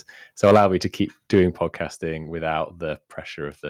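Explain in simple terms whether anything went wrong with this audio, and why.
A few things went wrong. First, microphone overload: from 0.43 to 0.66 s, just before "me to keep", and again from 1.34 to 1.43 s, the loudest moments turn harsh and crackly. The mic input was likely set too high, so the peaks got chopped flat.

Near each of those, the microphone volume stepped down, at 0.56 s and again at 1.56 s. Voice and background suddenly get quieter in one jump, likely because the call software noticed the overload and turned the mic input down.

Finally, there are two spots where a lost packet was rebuilt from error correction, at 0.79 to 0.81 s, right before "to keep", and at 2.23 to 2.25 s. There's no gap, but each 20 ms patch sounds briefly rougher and grittier, since it's rebuilt from a lower-quality backup copy.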